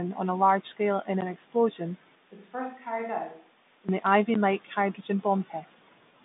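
At 1.21 s, just after "a large scale in", and again at 4.34 s, a block of digital silence replaced the audio. Each hole lasts about 12 ms, a block of 512 samples, and the abrupt cut to zero and back leaves a sharp tick.

From 2.15 s to 3.89 s the speech turns roomy and hollow, thinner in the bass and about 10 dB quieter, with faint room noise underneath. This is likely a switch to a distant microphone after the close one dropped out, and both transitions are sudden. Throughout, the telephone-band G.726 coding passes nothing above roughly 3.8 kHz.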